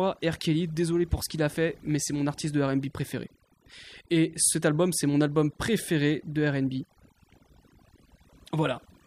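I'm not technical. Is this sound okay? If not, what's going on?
No. Overdone noise removal runs through the whole recording, from start to finish. A noise-cleaning tool was pushed too hard on this speech: whenever a slice of the sound came close to what it judged to be background noise, it turned that slice almost completely off. The pauses drop and break up into small twinkling specks, and the quieter parts of the voice were stripped away too.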